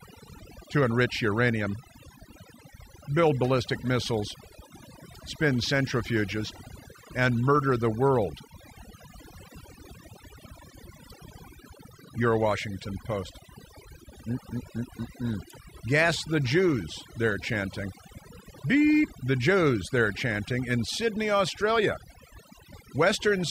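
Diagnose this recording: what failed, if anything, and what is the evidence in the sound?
A noise suppression stage in the call processing path was driven far too hard: overdone noise removal across the whole clip. Because it pulls down any frequency band that sits close to its noise estimate, the background collapses to near silence dotted with twinkling specks, and the quieter parts of the speech are removed along with the noise.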